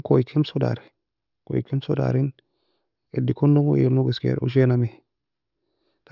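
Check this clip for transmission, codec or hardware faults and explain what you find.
Nothing stood out on listening to this speech recording.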